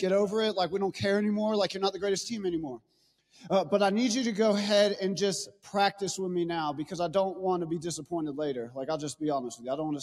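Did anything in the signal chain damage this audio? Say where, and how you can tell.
Yes. Throughout the clip, a call-processing noise suppressor meant for speech is acting on non-speech sound. Sustained parts and tails keep dipping by about 5 dB, while attacks mostly get through. That makes the sound pump, flutter or thin out. A compressor would respond to loudness. Here the gain follows how steady the sound is.

The noise suppressor cut sound more deeply at two points: 2.76 to 3.41 s, sinking about 18 dB, and 5.51 to 5.68 s, about 17 dB. The sound sinks in level rather than breaking off abruptly. Unlike a network dropout, there is no hard gap or click.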